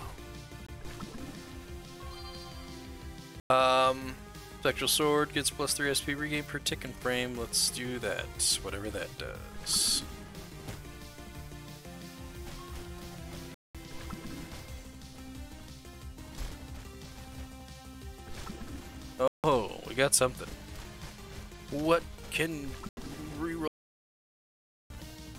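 The audio has five short holes at 0.67, 3.40, 13.54, 19.28 and 22.89 s, lasting about 20, 100, 200, 160 and 80 ms. Each gap is clean silence, and the sound resumes as if it had played on. This is likely a Bluetooth dropout, with lost link packets of roughly 20 ms each. From 23.68 to 24.90 s the audio cuts to complete silence for 1.22 s, with no room tone. That is an audio dropout to silence, likely from the input failing while silence was recorded.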